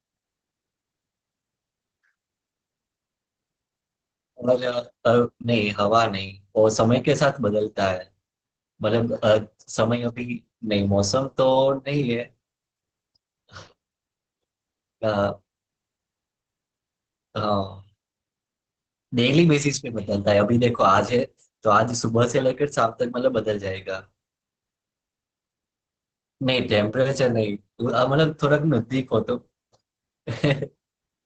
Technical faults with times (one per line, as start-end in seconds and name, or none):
0.00-31.25 Opus voice compression